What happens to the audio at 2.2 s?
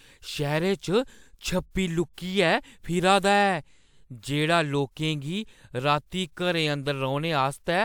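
Nothing goes wrong at 2.2 s; the speech runs through that moment intact, with no dropout, click or other fault.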